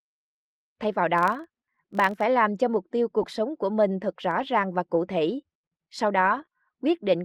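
From 1.18 to 2.27 s, a filter restarted on every block produces a 43.1 Hz buzz tracking the speech level, which fits a 1024-sample block reset to silence each time.

Lost packets rebuilt from error correction come at 3.19 to 3.25 s, 4.31 to 4.41 s and 6.21 to 6.43 s, spanning 40, 60 and 120 ms. The low-bitrate copies sound rougher and noisier than the surrounding speech.

At 6.45 to 6.49 s, a short concealed packet loss follows. About 20 ms never arrived, and roughly 15 ms was filled by extrapolating the last sound, giving a brief smear.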